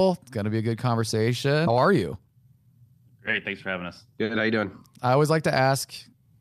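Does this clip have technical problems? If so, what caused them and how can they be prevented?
Yes. At 1.67 s there's a skip ahead: roughly 0.7 s of speech was dropped, either in transit or by an overflowing jitter buffer, and playback jumps straight on. A larger jitter buffer with smarter overflow handling prevents it.

From 1.77 to 6.13 s a jitter buffer speed-up kicks in, trimming pitch periods so speech runs about 7% fast at the same pitch, shedding around 0.3 s. Steadier network delivery avoids that backlog.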